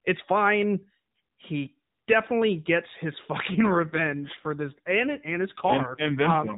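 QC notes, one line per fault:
3.50 s to end, AMR rate drop: speech abruptly turns rougher and more synthetic, with no gap and the same narrowband limit near 4 kHz. This fits the mobile codec switching from its 12.2 kbps mode to about 5.9 kbps, leaving fewer bits per frame.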